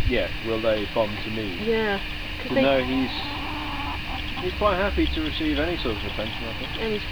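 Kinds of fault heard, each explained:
Low bit depth without dither: the audio was likely reduced to 8 bits by plain rounding with no dither, so the rounding error follows the signal instead of spreading as even noise. That error sits roughly 30 dB below the signal throughout, heard as graininess or hiss.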